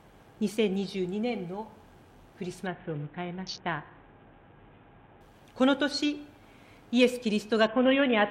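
A Bluetooth SBC bit pool drop runs from 2.67 to 5.21 s and again from 7.67 s to the end. Bandwidth collapses, consistent with the bit pool falling from about 28 to about 5, near 54 kbps. Starved upper sub-bands dull the treble, and coarse quantisation adds gritty noise.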